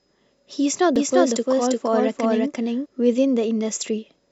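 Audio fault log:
0.96 to 2.86 s, doubled audio track: the speech is heard twice, a second copy trailing the first by around 0.4 s at roughly equal loudness, so syllables overlap in a smeared stutter. The trailing copy carries no reverberant tail or room colour and cuts in and out abruptly at both ends, which points away from an acoustic echo. The likely cause is the same signal being captured again through a slower path and mixed back in.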